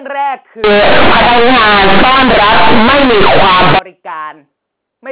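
From 0.64 s to 3.79 s the speech turns into very loud, buzzy distortion with heavy noise in the gaps: companded audio read as linear. The mu-law bytes are played as plain 8-bit samples without expansion, so every sign change swings across half the range and quiet passages blast as loudly as peaks.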